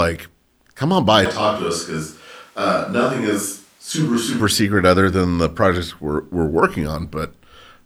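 A switch to a distant microphone runs from 1.25 to 4.40 s. The speech abruptly turns roomy and hollow, loses bass and drops about 5 dB, with room noise rising to roughly 35 dB below the speech. The close microphone likely dropped out, leaving a farther pickup.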